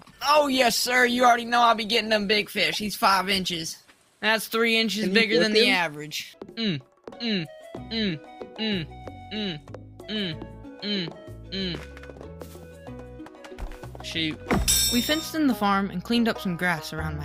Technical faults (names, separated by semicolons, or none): adaptive stream starting at a low bitrate